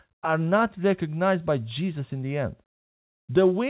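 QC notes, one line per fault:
Throughout, no fault can be heard in the speech. It has come over a WebRTC call path, and with nothing above 4 kHz the sound points to a narrowband G.711 mu-law call codec.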